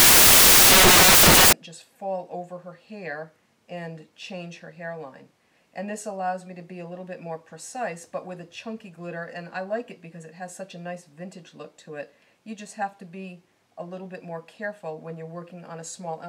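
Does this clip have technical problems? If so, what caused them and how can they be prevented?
Yes: from 0 to 1.53 s the samples are built from the wrong bytes, so loud, harsh broadband noise is heard. Check byte order and alignment when reading raw audio.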